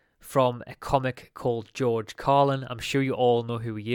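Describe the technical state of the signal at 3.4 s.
At 3.4 s the speech signal is intact, with no audible technical fault at that point.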